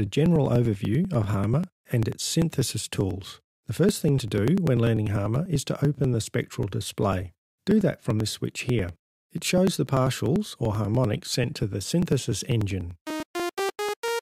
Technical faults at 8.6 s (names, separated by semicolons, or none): periodic USB or driver dropouts